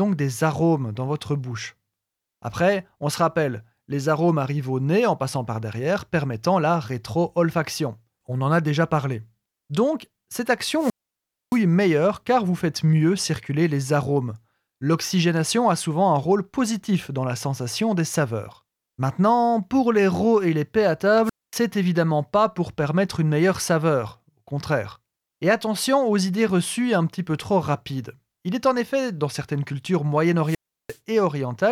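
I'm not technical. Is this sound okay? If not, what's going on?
No. There are three wireless microphone squelch dropouts, at 10.77–11.63 s, 21.24–21.57 s and 30.44–30.98 s. The mic's radio signal fades, you get a hiss, then the speech cuts out for roughly a quarter to two-thirds of a second.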